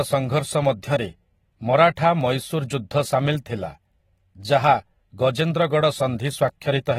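From start to finish the speech has likely passed through low-bitrate AAC compression. The coarse quantisation, which fits AAC-LC at around 24 kbps, leaves nothing above 16.6 kHz and plainly smears the sound, making it dull, with a fizzy, warbling edge on sibilants.

From 1.15 s to 6.48 s there are clock drift buffer slips. Two clocks disagreeing by a few hundred parts per million likely force the buffer to drop or repeat about 15 samples every 1.07 s, heard as about seven regular clicks.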